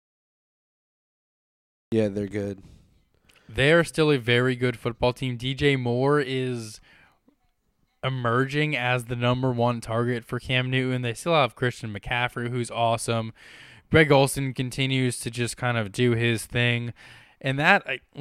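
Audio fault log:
0.00–1.92 s, cut-off start: nearly two seconds of flat digital silence, then the speech appears abruptly at 1.92 s, already partway through a sound with no natural onset or fade-in. The recording or stream began late, so whatever came before that point was never captured.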